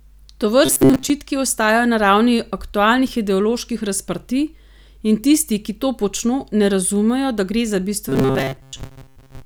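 A speech clip with a robotic sound from repeated short buffers at 0.66–1.10 s, before "ostajajo na ravni aktualnih", and from 8.09 s to the end, after "razumejo da gre za". A rigid 133 Hz buzz replaces most of the voice, likely from repeating roughly 7.5 ms buffers.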